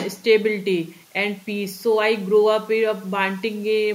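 Nothing stood out on listening to this speech recording.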